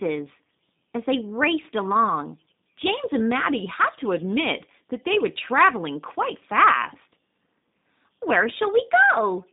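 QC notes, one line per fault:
Throughout, G.729 codec: speech is confined to a narrow telephone band of roughly 200 Hz to 3.7 kHz, with nothing above 3.7 kHz, and sounds plainly rough and synthetic. The speech is rebuilt from a vocal-tract filter, a pitch predictor and sparse pulses, which fits an 8 kbit/s G.729A stream.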